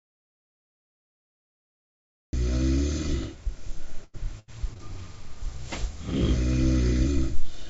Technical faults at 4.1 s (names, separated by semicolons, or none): repeated packet loss (robotic sound)